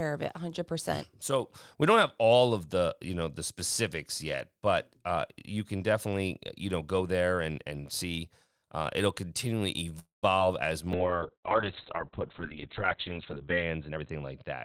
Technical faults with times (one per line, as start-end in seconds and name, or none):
9.99-10.25 call audio freeze
10.39-10.42 short concealed packet loss
10.95-14.64 call bitrate drop
13.88-14.22 jitter buffer speed-up